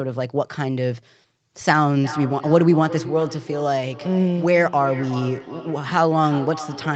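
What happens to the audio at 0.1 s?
Nothing goes wrong at 0.1 s: the speech there is intact, with only the expected band limit of the call path, which leaves nothing above about 8 kHz.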